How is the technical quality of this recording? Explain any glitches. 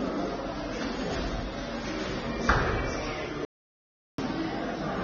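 The technical quality is poor, with two clear faults.

Throughout, the sound is dull, with nothing above 6.9 kHz. Smeared, warbling detail points to AAC compression, likely AAC-LC at a low bitrate near 24 kbps. The encoder discards high frequencies and coarsely quantises the rest to save data.

From 3.45 s to 4.18 s comes an audio dropout to silence lasting about 0.73 s. The sound cuts out completely, with no background left, then resumes. The input was likely lost while silence kept being written.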